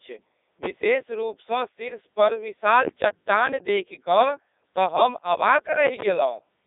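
From start to finish the speech sounds robotic and buzzy, with a synthetic texture and nothing above about 3.8 kHz, inside a narrow line band of roughly 250 Hz to 3.7 kHz. This is the Codec 2 vocoder at work, and the damage is heavy. Instead of keeping the waveform, it sends only pitch, voicing, energy and a spectral envelope, and the decoder rebuilds the voice from sine waves. The result fits its 3.2 kbit/s mode.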